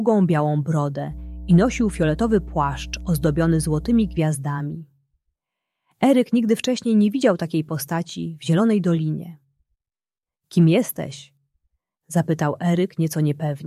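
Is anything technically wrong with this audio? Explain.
Yes. From 1.09 to 4.21 s a steady low drone sits under the sound, about 15 dB below it. This is mains hum at 60 Hz with some low harmonics, caused by a ground loop or nearby transformer coupling the power line into the signal path.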